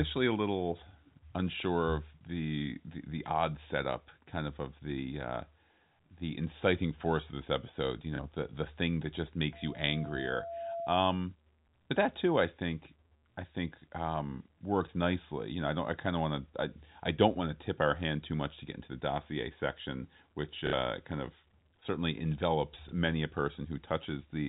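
At 8.16 to 8.19 s, a packet loss with the last packet repeated replaces 30 ms of the speech with a replay of the previous packet, which fits 30 ms packets. The single repeat is heard as a small blip. A plain dropout would go silent instead.

From 9.53 to 10.93 s, a loudspeaker feedback squeal appears. The microphone is picking up its own loudspeaker, and at 676 Hz the loop gain passes one. That single steady tone swells over about a second until it sits only a little below the speech. Its fixed pitch and self-sustaining growth distinguish it from a hum or whistle present from the start.

The same repeated-packet fault returns at 20.67 to 20.73 s, where 60 ms is lost and the replay runs long enough to buzz robotically at the packet rate, about 33 Hz. It occurs again at 22.89 to 22.92 s for 30 ms, as a small blip. Both events sit within the telephone band imposed by the G.711 coding.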